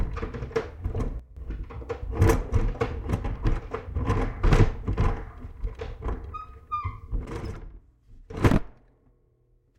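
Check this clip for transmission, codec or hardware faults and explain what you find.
Two sudden gain jumps are audible. From 1.20 to 1.37 s the level drops by about 12 dB, and from 7.25 s to the end it drops by about 17 dB. Each change lands between adjacent samples, so the sound and its background noise fall together. The likely cause is a gain setting or bit shift applied without a ramp.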